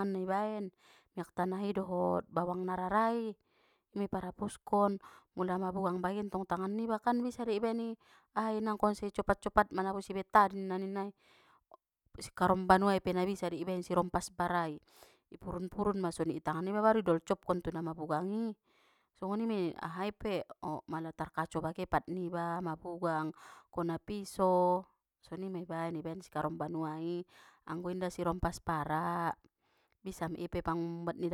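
Nothing goes wrong anywhere in this stretch of speech, so there's no technical fault to point to.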